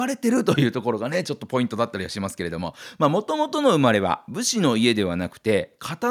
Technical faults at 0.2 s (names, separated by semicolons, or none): none